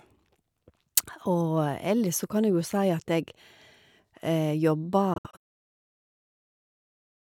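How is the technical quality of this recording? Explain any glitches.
The recording has one glitch, between 5.14 and 5.44 s. It sounds like a Bluetooth dropout, likely caused by audio packets reaching the headphones too late and being discarded. The speech breaks into short silent gaps, spread over about 300 ms. Together they remove roughly 150 ms of sound, and the longest single gap lasts 64 ms. After each gap the speech resumes further along, as if it had kept playing.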